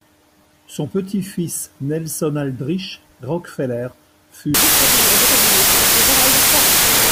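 Everything's fine until about 4.54 s, and from there to the end you get a wrong sample width fault. Audio that was written as 16-bit integers is being read as packed 24-bit, so each three-byte value straddles pieces of neighbouring samples. Only some of them line up with the real high bits, which is why the speech sits buried under loud, harsh noise. It also runs about 1.5 times too fast and too high in pitch.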